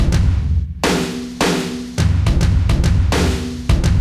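No technical faults can be heard anywhere in this recording, and the signal stays steady and intact throughout.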